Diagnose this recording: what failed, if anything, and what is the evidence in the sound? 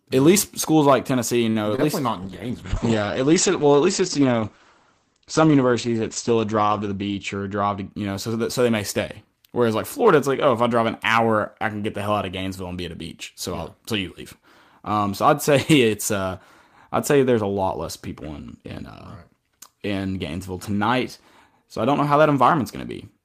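At the network stage, a packet arrived late and the jitter buffer ran dry. From 1.49 to 1.70 s, a short stall from a late packet holds one sound for roughly 54 ms, with a slight buzz or dip.

A packet was lost at the network stage and concealed. At 1.76 to 1.80 s, just before "least not", about 20 ms is replaced by extrapolated sound, heard as a brief smear.

The call bitrate dropped from 32 to 10 kbps when bandwidth estimation fell. From 2.24 to 7.96 s, between "least not" and "you know so that", the codec limits the audio to 8 kHz, making it muffled and rough.

A jitter buffer speed-up inside the call buffer trimmed pitch periods to cut delay. From 6.88 to 7.36 s, about 70 ms is removed, and the speech runs at 111% of normal speed, sounding hurried at unchanged pitch.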